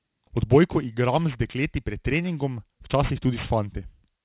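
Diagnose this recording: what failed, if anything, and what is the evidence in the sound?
Aliasing runs through the whole recording, introduced at sample-rate conversion. Sibilants come out gritty and metallic, and the spectrum stays full right up to a hard edge at 4 kHz. That edge fits a drop from 44.1 kHz to 8 kHz with no anti-alias filter. Speech energy above 4 kHz was not removed first, so it folds back below that line as false, unrelated tones, sitting roughly 20 dB under the speech.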